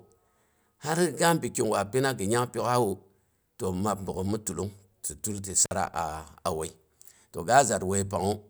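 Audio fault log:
5.64 to 5.72 s, intermittent contact. Right after "tilan ti" the speech drops out abruptly, with a short crackle as the sound leaves and another as it returns. The gap is about 52 ms of near silence, with only faint hiss underneath. This is the sound of a loose plug or cable losing connection for an instant. The signal path opens, the conductor scrapes, and the edges of the break click before contact is made again.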